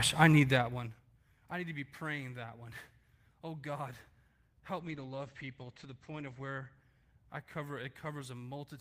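From 4.8 s to 7.69 s the speech turns rough and muffled in a call bitrate drop: the encoder was starved of bits, coding coarsely and cutting the top end to about 8 kHz, which fits a fall from roughly 32 to 12 kbps. Unlike a fixed filter, the grainy texture eases back as the rate recovers.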